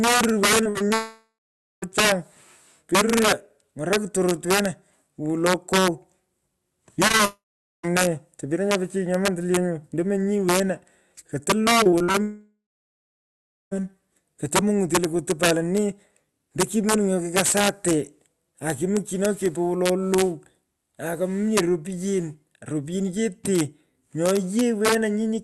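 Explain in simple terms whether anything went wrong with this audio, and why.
Several things went wrong in this speech recording.

Integer overflow runs through the whole clip. When the loudest moments get too loud, the signal wraps around to the opposite extreme instead of being capped. You hear violent cracks on those peaks, much harsher and snappier than the flat, fuzzy distortion of ordinary clipping.

Repeated packet loss (robotic sound) happens from 0.63 to 0.92 s and again from 11.84 to 12.16 s. Small pieces of the call, four in the first stretch and five in the second, went missing one after another. Each was patched over, so the voice turns choppy and robotic. The sound keeps going through these stretches, unlike a dropout.

A long network dropout happens three times: from 0.94 to 1.84 s, from 7.25 to 7.86 s, and from 12.22 to 13.81 s. The last sound trails off into a fading buzz or hiss, then goes silent for about half a second, then about 0.44 s, then about 1.1 s. 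The speech then resumes with that part simply gone, likely because the connection stalled.

Short concealed packet loss occurs at 7.08, 7.12 and 7.17 s, each only about 20 ms. Each one is a tiny smear or wobble where a sliver was filled in, far too brief to leave a silent gap like the dropouts do.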